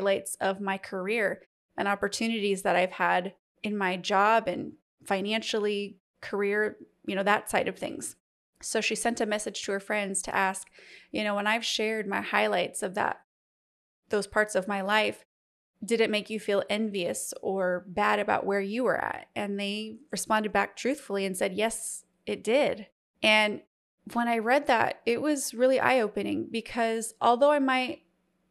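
There are no technical faults to describe in time order anywhere in this speech recording.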